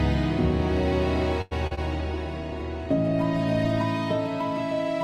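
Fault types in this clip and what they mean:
Short stall from a late packet: At 1.41 to 1.53 s the sound is held too long, stretched by about 97 ms with nothing lost. A packet arrived late, the jitter buffer ran dry, and the receiver extended the last sound before resuming exactly where it stopped.
Short concealed packet loss: At 1.67 and 1.75 s the sound briefly smears as short stretches, 60 ms and 20 ms, are replaced by 36 ms and 24 ms of continued previous sound. Those packets never reached the decoder, so it filled the gaps and blended back, catching up about 20 ms.
Call bitrate drop: From 1.93 to 3.91 s the sound loses its top end, with content above 12 kHz gone instead of reaching 20 kHz, and detail is coded more coarsely. The bandwidth estimate fell, cutting Opus from 64 to 16 kbps for about 1.9 s before it recovered.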